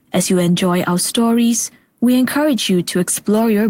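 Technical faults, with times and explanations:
Nothing stood out on listening to this speech recording.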